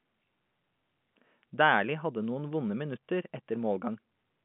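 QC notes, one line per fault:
No fault to note: the speech sits in the ordinary telephone band, with nothing above about 3.7 kHz.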